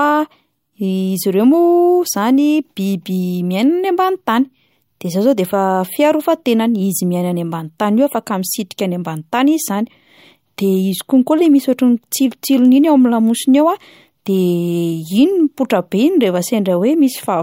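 A speech recording with nothing technically wrong to point at, so there's no fault to report here.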